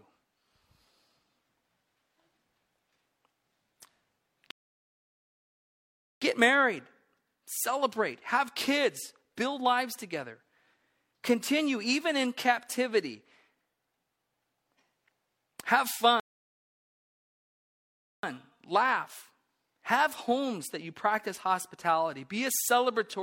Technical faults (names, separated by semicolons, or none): rebuffering stall